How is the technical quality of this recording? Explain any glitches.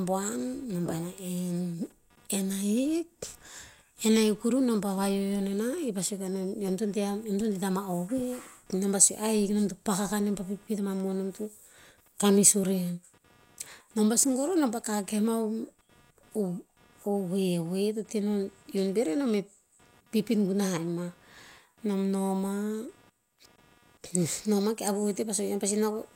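The recording carries computer activity noise throughout the speech, a faint buzzy chatter sitting roughly 35 dB below the voice. It pulses at around 200 times per second and surges and fades independently of what is being said. Changing load on the processor, graphics card or mouse shifts the ground shared with the audio circuitry, and those shifts leak in as chirps and scratches. Unlike steady mains hum, its texture keeps changing with the computer's workload rather than holding one fixed pitch.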